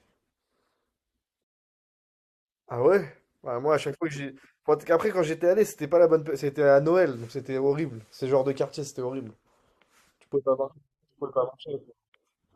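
Nothing technically wrong can be heard anywhere in this speech recording.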